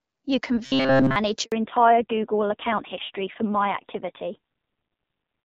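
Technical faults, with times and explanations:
0.66 to 1.16 s, robotic sound from repeated short buffers: for half a second the speech becomes a stiff, metallic buzz pitched at 134 Hz. The likely cause is audio arriving too slowly, so the playback side loops the most recent fragment instead of playing fresh samples. A repeat period of about 7.5 ms fits that 134 Hz tone. Essentially the whole stretch is recycled material, so the voice keeps only the rough shape of the words.
1.44 to 1.52 s, handover gap: the speech drops out for 80 ms, fading within a few tens of milliseconds and staying silent until audio resumes. This is what a call handover between networks sounds like. While the phone switches links, no speech frames get through, and the receiver has nothing to play. Whatever was said in that window is gone rather than delayed, and the sound continues directly into the degraded section that follows.
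1.52 s to the end, fallback to narrowband: from this point nothing above 4 kHz remains. Sibilants lose their edge and the voice turns dull, boxy and rougher. Before the gap, the clearer HD Voice sound fits AMR-WB at about 12.65 kbit/s. Afterwards the sound points to a low-rate narrowband codec near 5.9 kbit/s. Its smaller bit budget and coarser speech model explain the added rasp on top of the lost treble.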